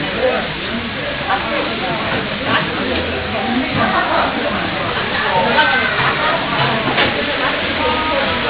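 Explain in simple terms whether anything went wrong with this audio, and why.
From start to finish, the bright parts of this audio sound gritty and metallic, with harsh tones that don't belong to the original sound. This is aliasing. The audio was converted to a much lower sample rate, which fits a drop from 48 kHz to 8 kHz, without first removing the high frequencies. Anything above the new limit of 4 kHz couldn't be stored, so it folded back down as false, unrelated tones.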